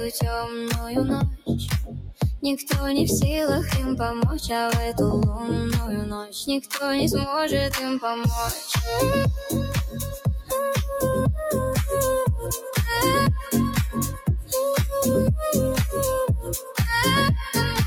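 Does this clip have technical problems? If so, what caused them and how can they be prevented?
Yes. A noise suppressor built for speech has been applied to this sound throughout. It reads sustained, steady parts of the audio as noise and keeps pulling them down, so the level wavers by around 5 dB. Unlike compressor pumping, these dips track how steady the sound is, not how loud. Disable speech-oriented noise suppression whenever the source is not speech.

The sound is also cut by the noise suppressor at two points: from 1.86 to 2.22 s, sinking by about 15 dB at its deepest, and from 16.59 to 16.78 s, by about 10 dB. Unlike a dropout, the sound is pulled down rather than replaced by a gap. Keep the suppressor off for this kind of material so it cannot misjudge it as noise.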